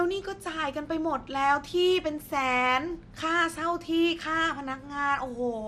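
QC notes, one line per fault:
Throughout, MP2 compression: the speech was most likely coded as MPEG Layer II at a rate that fits around 80 kbps, too few bits for its 32 sub-bands, so the top bands are shut off and nothing survives above 14.4 kHz, while the remaining bands flicker in and out and are coarsely quantised. That leaves the speech dull at the top and laced with a plainly audible gurgling, granular grit, the familiar sound of low-rate digital radio.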